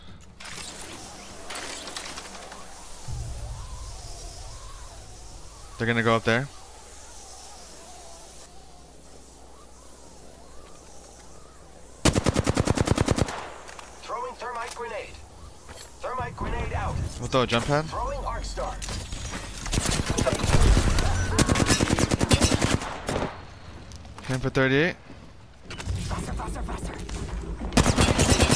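Wrong sample rate from 3.33 to 5.63 s: the audio runs at about 0.92 times its proper speed and drops about 1.5 semitones, sounding slower and lower together. This fits 24 kHz material played back at 22 kHz without any rate conversion.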